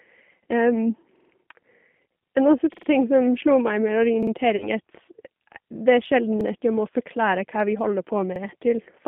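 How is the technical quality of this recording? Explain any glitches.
Technical quality is poor: the speech has been through a low-bitrate telephone codec, and it is interrupted by several stutters and one concealed dropout.

Throughout, the speech has passed through the G.729 codec, an 8 kbit/s VoIP coder. It discards the waveform and resynthesises the voice from a vocal tract filter, a pitch predictor and a few pulses per frame. The line here is limited to about 150 Hz to 3.5 kHz, so the sound is thin and muffled, with a plainly audible rough, synthetic edge.

At 1.16, 2.74, 4.23, 6.41 and 8.36 s there are repeated buffers. Fresh audio failed to reach the output in time, so the device replayed the chunk it already held. Each chunk lasts about 46 ms, which fits a 2048-sample buffer. The same fragment plays again three times at the first two points, twice at 4.23 s, and once at the last two, just before "at jeg må forklare" in the fourth case. 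Each is heard as a brief mechanical stutter with hard joins.

From 4.56 to 4.69 s there is VoIP packet loss concealed by the speech codec. About 40 ms of audio went missing, which points to two lost packets. The decoder filled the gap by extending the last pitch and filter shape at falling gain, so the sound smears into a buzzy tone or coloured noise that fades. Because each frame depends on the previous one, the voice stays weak or distorted for a short while after the packets return.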